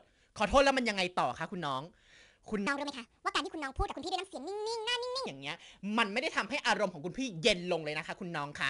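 Throughout the speech, 4-bit ADPCM compression adds a gritty hiss that rises and falls with loudness, and sharp onsets crunch where the step size lags. Nothing is present above 10.7 kHz, which fits a low-rate encoding near 89 kbps. Unlike steady background noise, this hiss vanishes in pauses.

From 2.67 to 5.26 s, a section at the wrong speed runs 1.58 times fast, with pitch raised roughly seven semitones, likely from playback against the wrong clock. Because tempo and pitch jump together, it differs from a pitch-shift-only fault.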